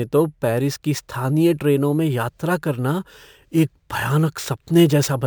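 Throughout the speech, imaging from sample-and-hold upsampling adds a metallic fizz above 11 kHz, about 25 dB down, tracking loudness. This fits a 22 kHz source raised to 44.1 kHz.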